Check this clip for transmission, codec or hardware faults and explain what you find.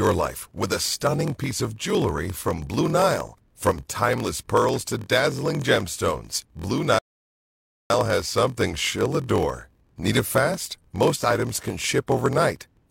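Two faults stand out in this speech recording: a block size mismatch (padded) that runs throughout, and one rebuffering stall.

Block size mismatch (padded), whole clip: a steady 43.1 Hz buzz rides under the speech, and everything plays at 0.938 times normal speed with the timbre intact. The writing stage delivers shorter blocks than the reader's 1024-sample frame, which fits roughly 960-sample blocks, and the shortfall is zero-filled. On a waveform, tiny flat gaps recur at a regular interval. A spectrogram shows thin vertical dropout lines spaced about 23 ms apart.

Rebuffering stall, 6.99 to 7.90 s: the audio drops to silence, then resumes seamlessly with "has something she'll adore", adding about 0.86 s. The player exhausted its downloaded data and waited for more, so nothing is lost. The waveform goes flat and the spectrogram shows a clean blank column.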